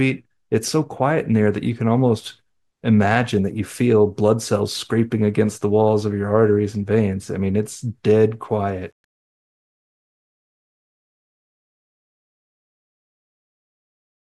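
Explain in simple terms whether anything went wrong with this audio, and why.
The fade-out from 8.51 s has truncation distortion. Too few level steps make the sound gritty, worst from 9.95 s to the end.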